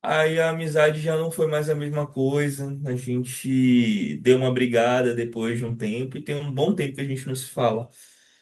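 At 0.33 s, 2.87–2.93 s, 5.67–5.73 s and 7.59–7.61 s, lost packets were rebuilt from error correction: brief rough, noisy patches with no gap, unlike smeared concealment guesses.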